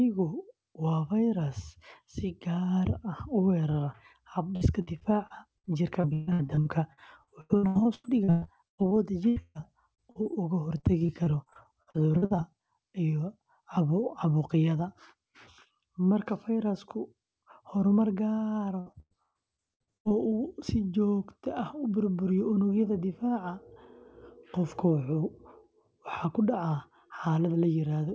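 From 4.56 to 8.93 s the speech turns choppy and robotic, with pieces repeatedly missing. This is repeated packet loss: about two dozen holes, the longest 138 ms, were patched by extending the last sound, filling 28% of that stretch.

Two bursts of packet loss follow, at 9.29 to 9.38 s and 9.42 to 9.57 s. Each sounds like a held buzz or fading hiss before the speech jumps ahead. Runs of 80 and 120 ms were lost and replaced by the continued, decaying last sound.

Brief smears or wobbles come at 9.95 to 10.00 s, 10.12 to 10.17 s and 10.23 to 10.27 s. These are short concealed packet losses of 20 to 40 ms, each bridged by extending the previous sound and blending back into the real audio.

The robotic choppiness of repeated packet loss returns from 10.77 to 12.40 s, with gaps of at most 43 ms covering 21% of that span. It comes back from 18.80 to 20.12 s, where gaps up to 122 ms cover 39%. 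Throughout the clip, nothing is heard above 8 kHz, which fits a G.722 call path at 64 kbps.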